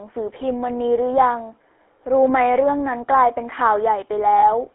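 From start to finish the speech has passed through the GSM full-rate codec, a coder that models the vocal tract and excites it with a sparse, regularly spaced pulse train, keeping only a fraction of the real excitation. At a rate consistent with 13 kbps, this leaves the voice plainly buzzy and gravelly, and the line band confines it to roughly 300 Hz to 3.5 kHz, so it sounds thin and telephone-like with no air above.

From 4.38 to 4.48 s there are lost GSM frames. About 40 ms of coded data failed to arrive, which fits two consecutive 20 ms frames. The decoder filled the gap by reusing the settings of the last good frame. Instead of a clean dropout, the speech briefly smears into a rough, metallic ring before normal decoding resumes.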